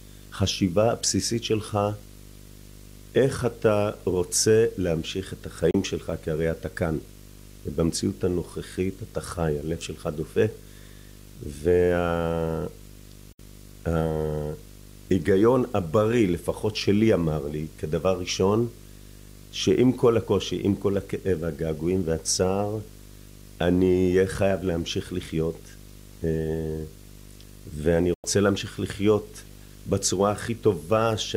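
A steady buzz at 50 Hz runs under the speech for the whole clip, with a hash of harmonics above it and a thin, very high tone at 15.6 kHz. The buzz sits around 20 dB below the speech. This is video or display buzz: a screen or video cable coupled into the audio path, so the 50 Hz picture field rate and the line scan near 15.6 kHz leak in as sound.

The speech then cuts out three times, each gap fading down and back in over about 3 ms. The first, at 5.71 s, removes about 32 ms. The second, from 13.32 to 13.40 s, removes about 64 ms. The third, from 28.14 to 28.25 s, removes about 96 ms. These are digital broadcast dropouts: the receiver lost the signal or rejected corrupt frames and muted until clean data returned. The gap lengths fit one, two and three lost frames of 32 ms each. Whatever was sent during those moments is gone.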